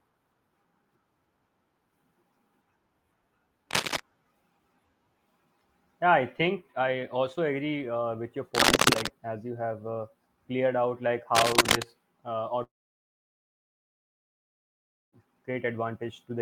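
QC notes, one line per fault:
3.71 to 4.00 s, 8.55 to 9.10 s and 11.35 to 11.83 s, cable scratch noise: three bursts of dense, uneven crackle laid over the speech, the first at about the speech's own level and the later two about 5 dB above it. The irregular scraping fits a worn connector or lead being moved, which likely made the contact resistance jump about. On a spectrogram each burst is a ragged broadband smear with vertical streaks; the waveform shows spiky, jagged bursts that stand above the speech envelope.
12.63 to 15.14 s, long network dropout: about 2.5 s of audio is missing. The receiver briefly stretches the last sound into a fading buzz, then holds near silence for almost all of the gap before the speech resumes further on, with the lost part skipped. This is likely a long loss of incoming packets. The waveform shows a short decaying tail followed by a flat line; on the spectrogram a brief fading smear gives way to an empty band until the speech returns.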